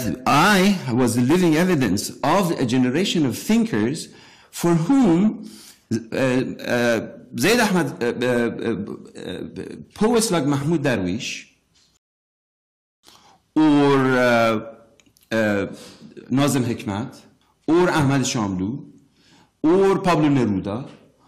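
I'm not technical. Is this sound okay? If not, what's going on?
No. At 11.97 seconds there is a rebuffering stall: the player used up all the audio it had downloaded and had to wait for more to arrive before carrying on. To your ear, the sound cuts to silence and stays quiet until about 13.04 seconds, then picks up exactly where it left off. Nothing is missing, but the pause adds roughly 1.06 seconds to the playback.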